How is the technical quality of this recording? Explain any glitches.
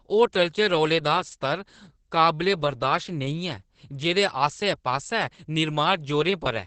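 The quality's held back by heavy Opus voice compression running the whole way through. It sounds like the SILK speech coder at a low rate, likely around 10 kbps, with the band cut near 8 kHz and the excitation coded coarsely, so the speech comes out muffled, hoarse and a bit robotic.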